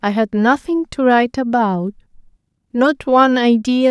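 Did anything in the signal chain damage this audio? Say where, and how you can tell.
No, nothing stood out on listening to this speech that would point to damage at any stage of the chain.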